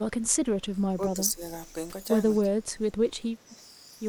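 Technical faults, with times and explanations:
0.45–1.42 s, 2.42–3.12 s, 3.34–3.61 s, speech suppressed in double talk: the speech dips by about 10, 15 and 5 dB, likely because the echo canceller ducked it while both sides spoke. The waveform shows notched envelopes.
3.49–3.56 s, echo leak: a faint copy of the speech returns 233 ms late, about 25 dB below it. The spectrogram shows a weak, shifted repeat of the harmonic traces, likely residual loudspeaker echo that the canceller missed.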